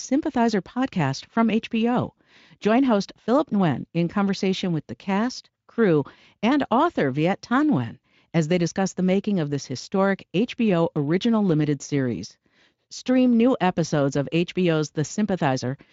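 No technical faults can be heard in the speech, and the Speex coding leaves at most a faint trace.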